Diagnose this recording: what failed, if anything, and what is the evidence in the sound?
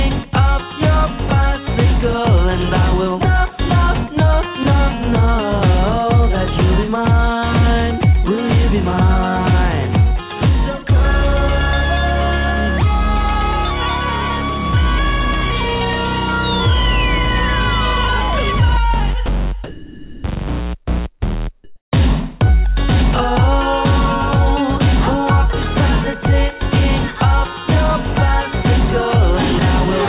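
At 19.26 s there's a 20 ms gap where the sound cuts out and steady noise or near silence sits in its place. That's the signature of sound dropped by the voice detector, at the call-processing stage. The sender's detector likely judged that instant to be background, stopped transmitting for 20 ms, and the receiver filled it with comfort noise until the detector picked the signal up again. It's brief.

Two stretches, 19.64 to 20.24 s (600 ms) and 21.64 to 21.92 s (280 ms), have comfort noise in place of the background, also in call processing. The real background, with its texture, gives way to a smooth, featureless hiss, with the level shifting by about 18 dB in the first stretch and about 22 dB in the second. That's likely discontinuous transmission, with the receiver synthesising noise to cover the pauses. The band stops at 4 kHz throughout, consistent with a G.711 call codec.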